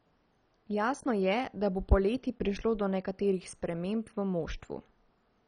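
From start to finish the speech carries heavy MP2 compression damage, likely from MPEG Layer II coding at a very low rate, consistent with about 32 kbps. Starved of bits, the upper sub-bands are dropped, leaving nothing above 10.4 kHz, so the sound is dull, while the surviving bands are coarsely quantised and gurgle with a granular roughness. A spectrogram shows a hard ceiling at 10.4 kHz with blocky patches flickering on and off beneath it.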